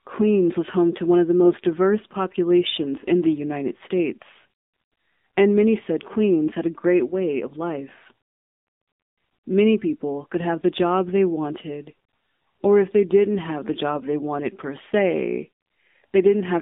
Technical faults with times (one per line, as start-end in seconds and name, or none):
0.00-16.61 AMR narrowband mobile codec